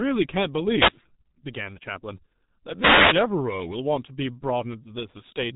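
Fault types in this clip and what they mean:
G.723.1 codec: The speech was passed through a very low-rate telephony coder, and the heavy damage fits its 6.3 kbit/s mode. The coder sends only a coarse model of the voice in 30 ms frames and updates it slowly, so fine detail is lost. Nothing above 3.8 kHz survives, which leaves the speech muffled, and the coarse model makes the voice sound hoarse, with consonants smeared and indistinct throughout the clip.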